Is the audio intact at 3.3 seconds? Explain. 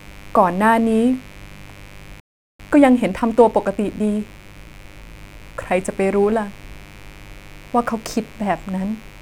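No. At 3.3 seconds the speech sits inside a time-compressed catch-up that runs from 2.59 to 5.59 s. The player is shortening a backlog after a stall. It cuts out small pieces of audio and cross-fades across the joins. The speech plays about 1.1 times faster than normal, but its pitch does not change. It sounds hurried.

A mains buzz is also present at this point, as it is across the whole clip. It comes from 50 Hz mains. Sharp switching spikes, of the kind a dimmer, rectifier or missing shield lets in, arrive twice per cycle. They fill the spectrum with harmonics reaching up to several kilohertz. The result is a steady, raspy buzz. It sits about 25 dB below the speech.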